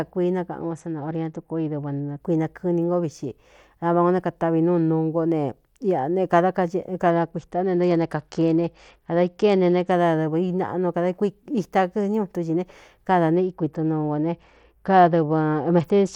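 From 0.61 to 2.21 s, 7.10 to 9.91 s, and 13.36 s to the end, a Bluetooth SBC bit pool drop dulls the speech and adds grit, which fits the bit pool falling from 31 to about 10.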